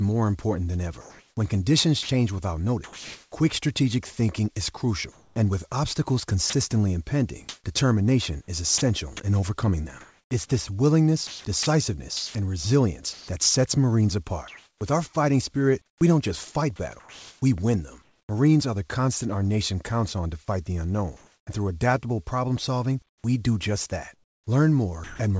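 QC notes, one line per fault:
1.01–3.32 s, comfort noise in place of the background: About 0.9 s of real background becomes steady, featureless hiss. Likely discontinuous transmission during the pause.
2.03–2.09 s, sound dropped by the voice detector: A 60 ms piece of speech vanishes into steady noise. The detector likely mistook quiet sound for background.
5.12–18.29 s, sound chopped by the voice detector: Speech is repeatedly clipped, with about 2.5 s replaced by fill, likely from the detector toggling transmission.
21.17–21.47 s, comfort noise in place of the background: 300 ms of background turns flat and about 2 dB quieter. The background sits about 52 dB below loud passages. Likely synthetic fill.
23.09–25.19 s, sound chopped by the voice detector: Choppy speech with about 630 ms swapped for noise, likely from repeated detector switching.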